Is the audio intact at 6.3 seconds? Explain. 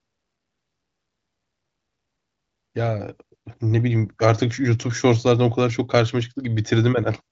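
Yes, the speech at 6.3 seconds is intact, carried cleanly through the AMR wideband (HD Voice) codec with its band ending around 7.5 kHz.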